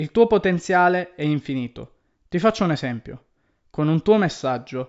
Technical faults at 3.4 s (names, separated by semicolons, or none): none